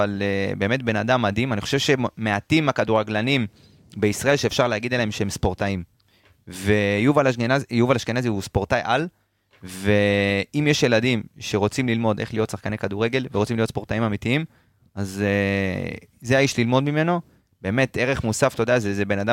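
No technical faults can be heard anywhere in this speech recording. There is nothing in the audio to point to or time.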